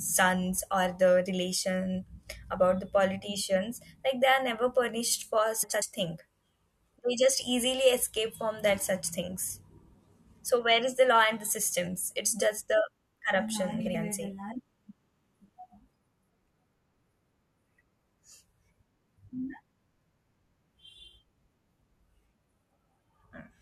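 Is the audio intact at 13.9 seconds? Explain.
No. After "just the corruption", frames arrive out of order from 13.80 to 13.95 s. Two neighbouring 70 ms blocks swap places, giving a garbled flutter.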